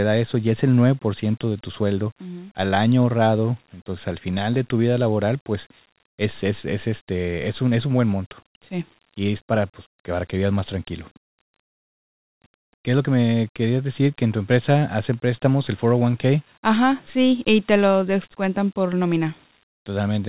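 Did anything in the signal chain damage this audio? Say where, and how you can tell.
No, the speech shows no damage from the chain; it has the narrow, telephone-band sound of a G.711 mu-law call path at 64 kbps, with nothing above 4 kHz, as that codec delivers when working normally.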